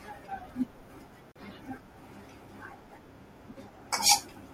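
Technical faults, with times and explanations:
1.32 to 1.36 s, gap at a join of encoded pieces: the speech drops out for about 39 ms, with its edges softened, then resumes where it stopped. Two separately encoded segments were joined untrimmed, leaving the encoder's start delay and final-frame padding.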